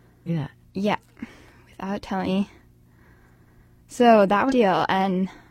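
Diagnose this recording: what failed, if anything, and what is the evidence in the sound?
The codec stage failed, with damaged data in a compressed stream. Short glitches break the speech at 0.24–0.29 s, 2.23–2.29 s and 4.46–4.53 s, each about 60 ms. Corrupt bytes made the decoder misread frames and resynchronise, producing a short glitch.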